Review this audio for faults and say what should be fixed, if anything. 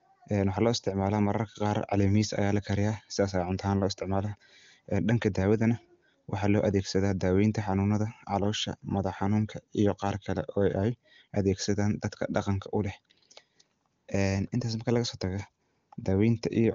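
No faults; nothing needs fixing.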